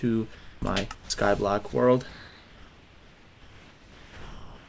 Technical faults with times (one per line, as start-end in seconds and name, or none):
0.35-0.62 comfort noise in place of the background
0.58-0.62 onset clipped by the voice detector
0.95-1.10 sound dropped by the voice detector
1.70-1.73 sound dropped by the voice detector
2.09-4.68 comfort noise in place of the background